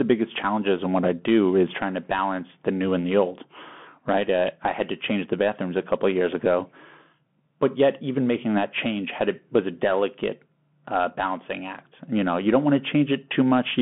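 Speech passed through a Bluetooth CVSD headset codec throughout, with plainly audible damage: one-bit delta coding, consistent with a 64 kbps link, adds granular hiss, scratchy s sounds and slope-overload distortion on loud peaks. A spectrogram shows energy only from 150 Hz to 3.4 kHz, nothing above 3.8 kHz.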